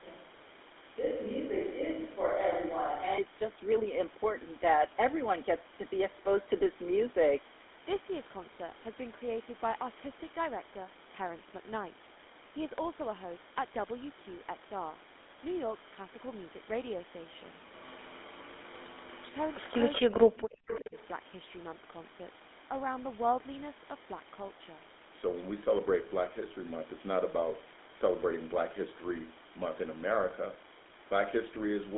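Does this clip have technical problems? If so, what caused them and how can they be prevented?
Yes. Throughout the clip, the speech carries the buzzy, gravelly roughness of the GSM full-rate codec, which fits its 13 kbps rate. Its pulse-driven vocal-tract model discards fine excitation detail, the band runs roughly 250 Hz to 3.6 kHz, and nothing remains above 3.8 kHz. Routing the call over a wideband codec rather than legacy GSM prevents this.

From the start until 3.18 s, the voice sounds roomy and hollow with thinner bass, likely a switch to a distant microphone. The level barely changes, but a modest room-noise floor comes up. At 3.18 s the sound abruptly returns to close pickup. Checking that the close microphone is connected and selected before recording prevents this.

Echo leak appears at 19.52–19.73 s, 19.93–20.14 s and 20.67–20.81 s as delayed copies of speech trailing by 380 ms. 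They start faint and grow louder with each occurrence. These are likely residual loudspeaker echo that the far end's echo canceller failed to remove. Using a headset at the far end, or a better-tuned echo canceller, prevents this.

From 20.03 to 20.96 s, speech dips in pieces, very deeply at its worst, for about 0.7 s in total. This overlaps the echo bursts, so it is likely speech suppressed in double talk, where the canceller attenuates both the echo and the talker. Echo cancellation with proper double-talk detection, or headsets on both sides, prevents this.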